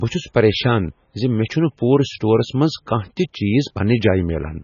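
From start to finish the speech sounds watery and swirly, with a metallic, chirping edge on s sounds and smeared consonant onsets. Nothing is heard above 6.9 kHz, so the top end is dull. This is likely heavy MP3 compression at a very low bitrate, consistent with something under 20 kbps. Short of bits, the encoder cut off the treble at that fixed point and let weak frequency components flicker on and off between frames.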